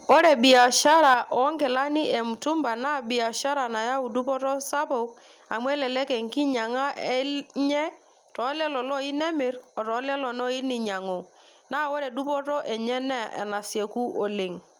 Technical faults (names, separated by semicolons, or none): microphone overload; microphone volume stepped down